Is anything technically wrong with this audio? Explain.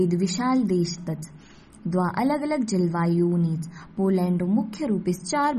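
Yes. Throughout the speech, the damage sounds like likely MP3 compression at a low bitrate, around 32 kbps: short of bits, the encoder cuts everything above 13.1 kHz and drops weak frequency lines frame by frame, so the treble is dull and the sound turns plainly watery and swirly.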